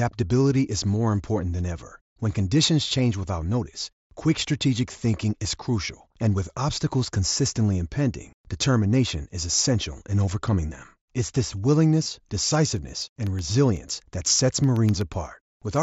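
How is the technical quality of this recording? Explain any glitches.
The recording has two kinds of glitch: brief concealed packet losses on the Bluetooth headset link and a run of regular driver dropouts near the end. The wideband mSBC headset audio carries the speech, with its light graininess on louder sounds.

Concealed Bluetooth headset packet loss: the radio link between headset and phone dropped voice packets, and the receiver covered each gap by repeating the closest-matching stretch of the waveform just before it. This happens at 4.44 s, right after "change without notice quick", at 5.44 s, just before "crucial and with obstacles", and at 10.30 s, after "determination is essential in". Each of these gaps is about 7.5 ms, the size of a single packet, and is almost hidden. From 12.03 to 12.06 s a longer gap of about 22.5 ms, about three packets in a row, is filled the same way and gives a short buzzy hold with a slight warble where the real audio resumes.

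Periodic USB or driver dropouts: from 12.77 to 15.76 s something briefly stalls the USB bus or audio driver every 0.125 s, eight times per second. Each stall blanks a tiny fraction of a millisecond with silence, around thirty times in all. These are heard as an even train of small ticks that show up only where there is sound to interrupt.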